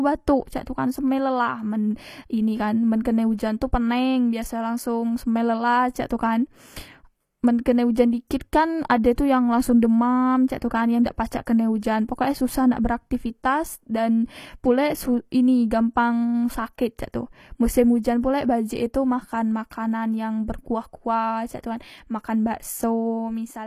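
Speech whose upper treble sounds synthetic throughout: sibilants come out gritty and metallic, the top end does not sit naturally with the voice below it, and nothing is present above 14.9 kHz. This is likely HE-AAC compression at a low bitrate, around 24 kbps. The codec keeps only the lower spectrum and regenerates the treble by copying lower bands upward under a coarse envelope, so the rebuilt harmonics fail to line up. At 11.04 s, just before "dak pacak kene ujan", a brief hiss of about 14 ms runs ahead of the attack, which sounds softened and smeared. That is pre-echo: the transform block spreads quantisation noise sized for the loud onset back across the quiet moment before it.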